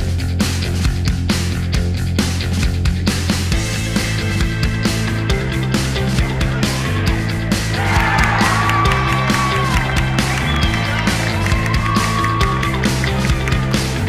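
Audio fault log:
No faults were heard in this audio.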